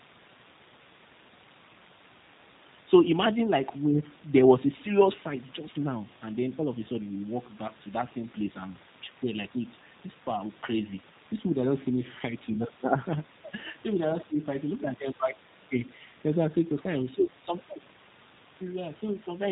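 From start to finish the speech sounds rough and somewhat synthetic, with a plainly audible coarseness and a dull, boxy top end because nothing above 4 kHz survives. This is the signature of the G.729 codec, running at a rate that fits 8 kbit/s. Rather than carrying the waveform itself, it rebuilds each 10 ms frame from a vocal tract filter, a pitch predictor and a handful of pulses, and that sparse reconstruction leaves the rough, artificial texture heard throughout.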